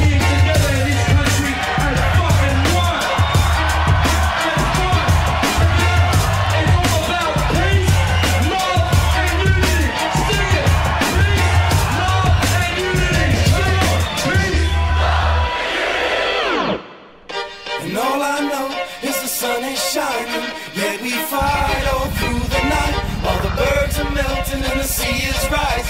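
At 23.75 s there is a block of digital silence lasting about 1.3 ms, a length that fits a 64-sample block the output buffer did not fill in time, or a calculation gave invalid values. The sound drops out and returns with no fade, and at this length it is heard as a brief tick or dip rather than a gap. On the waveform it shows as a tiny flat notch, and on the spectrogram as a thin vertical line.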